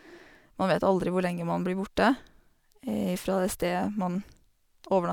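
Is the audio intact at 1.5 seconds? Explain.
Yes, at 1.5 seconds the audio is intact, with no dropout, click, distortion or other fault audible at that point.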